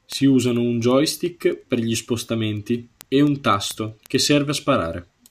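It's a speech clip with word clock ticks running from 0.12 s to 5.28 s: about seventy sharp ticks at roughly one every tenth of a second. The receiving device is free-running on its own clock, around 200 ppm off the sender's, slipping one sample each tick.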